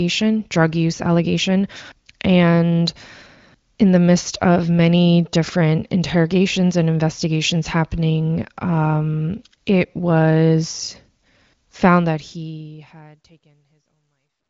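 No technical faults can be heard in this speech. The level eases down in a smooth fade out over the last couple of seconds, and the audio stops at about 7.5 kHz, which fits an AMR wideband (HD Voice) codec running at a high rate.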